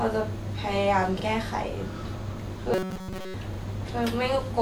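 At 1.20 s to 1.24 s there's a repeated buffer. New audio didn't turn up in time, so the device played its last chunk of about 43 ms once more, which fits a 2048-sample buffer. You hear the same sliver of speech twice with a hard seam between the two plays, giving a quick stutter. Nothing gets skipped, so the speech simply runs a touch late afterward.

From 2.74 s to 3.34 s the speech turns into robotic sound from repeated short buffers. A rigid, metallic buzz at 188 Hz sits over the speech, which still roughly follows its shape. The likely cause is fresh audio arriving too seldom, with the software looping a tiny slice of roughly 5 ms for most of that stretch while the real audio is dropped. That loop length sets the fixed buzz pitch.

At 3.54 s to 3.58 s the repeated buffer comes back in the same form, one extra play of about 43 ms. It's another short stutter with a hard join, and again no audio is lost.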